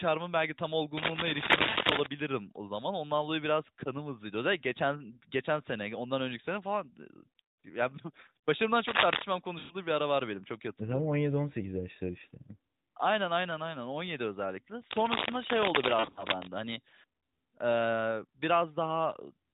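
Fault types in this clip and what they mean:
cable scratch noise: Three patches of dense, uneven rustling and scratching sit over the speech, from about 0.97 to 2.07 s (after "belki tam" and before "o zaman"), 8.86 to 9.22 s, and 14.91 to 16.48 s, each standing a few decibels above the voice. The cause is likely a worn cable, connector or control being moved, so its contact resistance jumps around rapidly and injects crackling bursts into the signal.
lost AMR speech frames: The voice briefly smears, warbles and sags in level, then recovers slightly rough. At 1.70 s a 60 ms gap fits about three 20 ms frames. At 9.60 to 9.75 s, just before "bir ara var benim", 100 ms is drawn out and fading. Around 16.0 to 16.25 s, losses totalling 120 ms are scattered over 160 ms. Corrupted radio frames were discarded, and the narrowband decoder repeated its last good pitch and vocal tract settings with falling gain.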